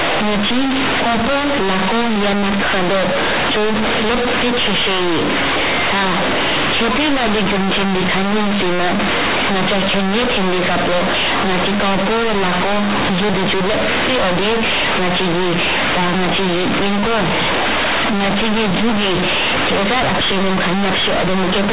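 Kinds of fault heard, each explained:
Companded audio read as linear: The speech was stored as A-law telephone bytes but is played as plain linear 8-bit samples, with no expansion step. A-law encodes level on a logarithmic scale, so read directly, each sign change swings the output across about half its range. Quiet sounds come out as loud as strong syllables. The result is very loud, buzzy distortion, with heavy noise in the pauses, inside the telephone coding's 4 kHz band.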